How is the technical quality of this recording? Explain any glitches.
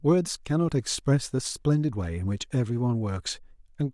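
No glitches are audible anywhere in this speech recording, so there is nothing to explain.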